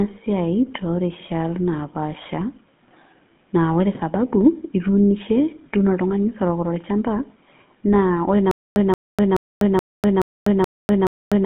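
Speech carried over a narrow telephone band, roughly 150 Hz to 3.5 kHz, with nothing at all above 3.8 kHz. The coding damage is plainly audible, a buzzy, gravelly roughness from the GSM full-rate codec, which fits a 13 kbps stream. That codec rebuilds speech from a vocal-tract model excited by a sparse, regular pulse train, so the fine texture of the voice is replaced by that coarse buzz. From 8.51 s to the end, just after "ore naa", there is a stutter with silent gaps. The same 178 ms fragment plays seven times, each followed by about 248 ms of digital silence, so it returns every 426 ms. This is likely a stalled player or stream replaying its last fragment at each retry and then running dry, and the speech that belonged in that stretch is lost.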